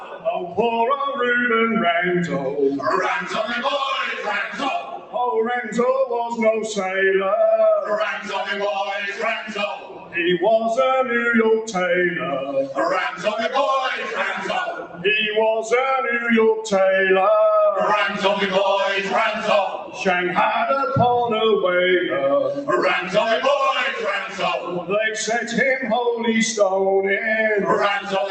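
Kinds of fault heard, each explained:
Noise suppressor applied to music or sounds: A speech-oriented noise suppressor stays active across the whole clip and treats sustained, steady material as noise. It keeps estimating a noise floor and pulling gain down whenever the signal looks stationary, so the level swings by around 10 dB as it engages and releases. Onsets pass largely intact while held portions and decays sink, giving an audible pumping, thinning quality throughout.
Sound cut by the noise suppressor: These are the points where the suppressor misjudges sustained sound as noise and attenuates it more than the rest. The level sinks, or a decay gets cut short, while transients still come through. This happens at 0.00–0.58 s (about 12 dB), 4.17–5.19 s (about 15 dB), 8.19–8.35 s (about 6 dB), 9.13–10.16 s (about 13 dB), 13.13–13.28 s (about 7 dB), 14.03–15.05 s (about 13 dB), 19.72–20.01 s (about 9 dB) and 24.26–24.91 s (about 10 dB).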